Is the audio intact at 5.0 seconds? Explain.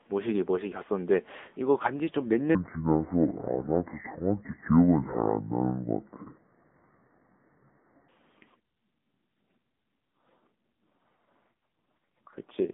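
No. From 2.55 to 8.08 s, a section at the wrong speed plays at 0.595 times normal. Pitch and pace drop together, about ten semitones lower. The speech turns deep and slow. Playback against a mismatched clock is the likely cause.

The AMR narrowband mobile codec also affects this moment. Nothing above 4 kHz passes, and the band sits roughly between 200 Hz and 3.6 kHz. A pulse-driven vocal-tract model rebuilds the speech. The buzzy, synthetic edge fits a low bitrate near 8 kbps.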